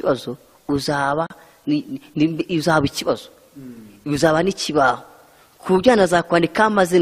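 Separately encoded pieces of audio were joined without trimming the encoder's start-up delay or the padding on each piece's final frame, so that dead time stays in the stream. At 1.27 s this gap at a join of encoded pieces opens a hole of about 37 ms in otherwise continuous sound, with its edges smeared by the codec. The sound then resumes exactly where it broke off. The pieces appear to be 6 s long.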